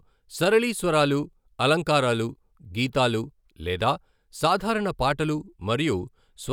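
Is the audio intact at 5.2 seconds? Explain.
Yes, at 5.2 seconds the audio is intact, with no dropout, click, distortion or other fault at that point.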